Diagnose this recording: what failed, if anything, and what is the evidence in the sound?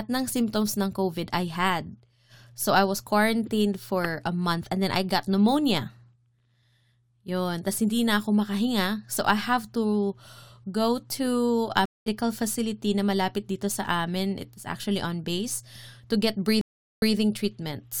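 Stream reconnect at the network stage: the waveform shows flat gaps at 11.85–12.08 s (208 ms) and 16.61–17.15 s (397 ms). The audio resumes about 0.2 s later, then 139 ms earlier, repeating material.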